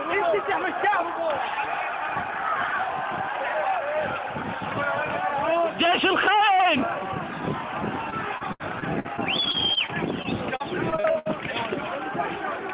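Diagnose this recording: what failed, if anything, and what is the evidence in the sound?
The network stage is the problem: from 8.1 to 11.3 s the sound turns choppy and robotic, typical repeated packet loss. Sixteen short holes, the longest 71 ms, get patched by stretching the last sound, so concealment covers about 16% of that stretch. The narrowband top end, nothing above 4 kHz, fits a G.711-type call codec.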